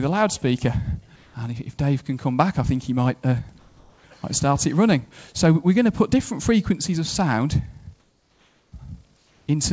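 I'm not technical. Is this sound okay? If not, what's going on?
No. There's comfort noise in place of the background: in the quiet gaps at 1.16 to 1.34, 3.59 to 4.04, 8.00 to 8.72 and 9.17 to 9.47 seconds, the real background drops out and a flat, slightly quieter hiss stands in. Most likely the sending end paused transmission during quiet moments and the receiving end filled the silence with made-up noise.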